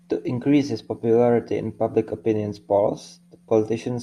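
No technical faults can be heard anywhere in the speech recording. There is nothing to mark at any point in the timeline.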